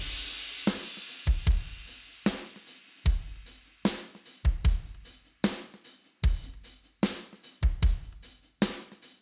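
No technical faults can be heard anywhere in the audio.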